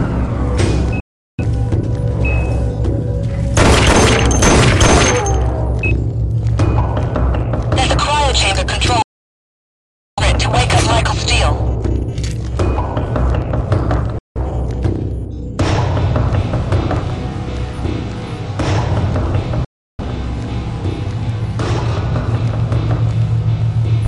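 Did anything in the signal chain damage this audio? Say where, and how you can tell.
Yes. A digital broadcast dropout occurs at 1.00–1.44 s, 9.02–10.23 s, 14.18–14.40 s and 19.65–20.03 s. Each time, the sound fades to silence within 3 ms and resumes further along. The receiver muted on lost or corrupt frames at the reception stage, so that material is gone.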